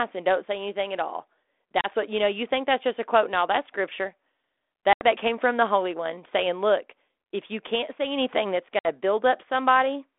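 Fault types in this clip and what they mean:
Packet loss on an ADPCM call: the speech drops into hard-edged holes of about 30 ms at 1.81 s, 80 ms at 4.93 s and 60 ms at 8.79 s, each a few packets' worth filled with silence. Because the decoder's adaptive predictor and step size lose track of the sender's, each return comes back slightly distorted before settling. A waveform shows flat gaps with abrupt edges, and a spectrogram shows blank vertical columns across the narrow telephone band.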